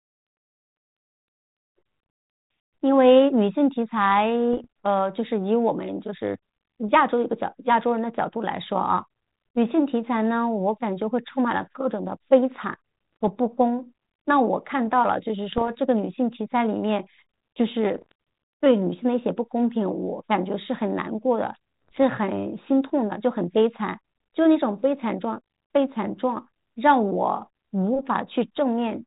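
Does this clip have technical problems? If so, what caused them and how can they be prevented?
Yes, there are bit errors on an ADPCM link, heard as short pops and rough, crackly bursts at 4.53–4.65 s, 13.13–13.16 s, 15.52–15.69 s, 17.95–18.12 s and 21.88–22.00 s. Each flipped bit knocks the decoder's step size and predictor off track, so the damage rings on for a few milliseconds with brief level jumps, at an error rate of a fraction of a percent. A cleaner radio path or stronger error protection on the link would prevent it.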